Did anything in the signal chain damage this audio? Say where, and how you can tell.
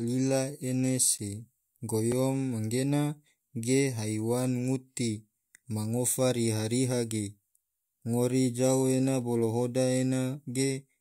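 Yes: the driver or buffer stage dropped two blocks of digital silence in this speech, at 1.18 s (about 12 ms, fitting a 512-sample buffer) and 2.12 s (about 3 ms), each heard as a tick.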